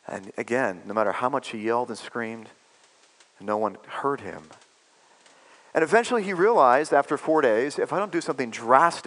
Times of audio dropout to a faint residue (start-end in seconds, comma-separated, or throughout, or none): none